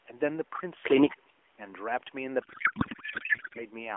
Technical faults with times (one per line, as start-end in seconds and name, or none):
2.42-3.65 codec payload misread